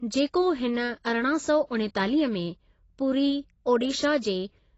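Low-bitrate AAC compression, likely AAC-LC, runs through the whole speech clip. The encoder had too few bits per frame to code every frequency band, so it discarded the top of the spectrum and quantised the rest coarsely. Nothing remains above about 7.9 kHz, and the damage is plainly audible as dull, smeared speech with a warbling, fizzy edge on sibilants, which fits a bitrate of around 24 kbps.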